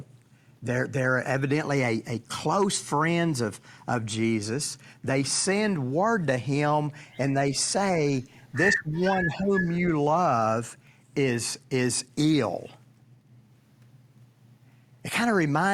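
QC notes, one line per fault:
8.72–9.01 s and 9.17–9.66 s, speech suppressed in double talk: the speech drops out deeply, then dips more mildly, likely an echo canceller turning both sides down while they overlapped. The waveform shows two pinched envelope gaps, and the spectrogram dims across both spans.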